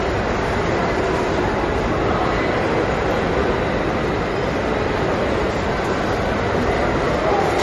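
An everyday sound recording, likely starved of bits by MP3 compression throughout, in a way that fits a low bitrate near 40 kbps. The encoder has cut everything above 13 kHz and dropped weak frequency lines that flicker between frames, leaving a plainly audible watery, swirling texture.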